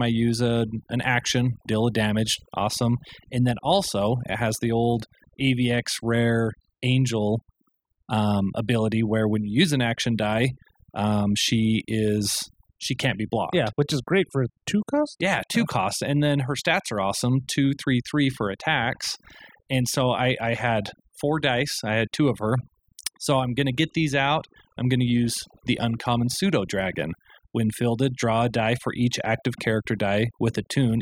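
From start to finish the speech carries overdone noise removal: a noise reducer set far too aggressively cut individual frequency bands whenever their level sat near its noise estimate, taking the softer parts of the voice along with the noise. The background falls to near silence dotted with twinkling specks. Unlike codec artefacts from a low bitrate, the damage follows the noise floor, gating quiet bands rather than smearing loud ones.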